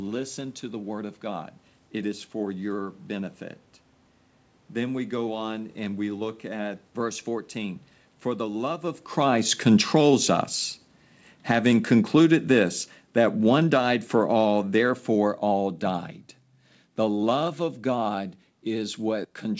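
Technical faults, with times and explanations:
9.14 to 10.16 s and 13.04 to 16.12 s, automatic gain falling: the gain control judged the input too loud, or its background noise too strong, and lowered its gain, by about 5 dB and then about 6 dB, so the speech and the room noise sink together. On the waveform the envelope tapers smoothly, and the spectrogram dims evenly below the 8 kHz call ceiling.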